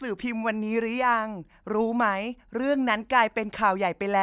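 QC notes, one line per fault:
No faults found on this speech recording.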